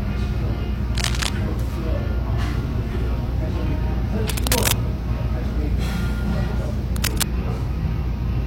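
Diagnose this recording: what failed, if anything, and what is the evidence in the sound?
Three bursts of cable scratch noise sit over the sound at 0.95 to 1.29 s, 4.29 to 4.73 s and 6.90 to 7.23 s. The middle one is roughly as loud as the sound itself, and the other two are a few decibels below it. The failure is in the analogue wiring, most likely a worn cable or connector being moved. As it shifts, its contact resistance jumps about and injects ragged, crackling noise. On a spectrogram each burst is a dense broadband smear. On the waveform it shows as fuzzy, irregular spikes riding on the signal.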